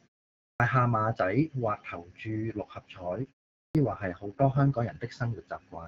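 At 0.47 s the speech comes in abruptly out of a 0.47 s silence, with about 0.13 s gone before "下馬". This is a clipped start after a pause. The output device dozed during the quiet and missed the onset while waking. From 2.28 s, after "或投注", an AMR rate drop sets in. The link pushed the AMR-WB codec down from 12.65 to 6.6 kbit/s. The band holds and nothing drops out. The voice turns rough and synthetic until 4.96 s. Inside that stretch, at 3.63 s, another clipped start follows a 0.38 s pause. About 0.12 s of the onset is lost, so the sound jumps in already under way.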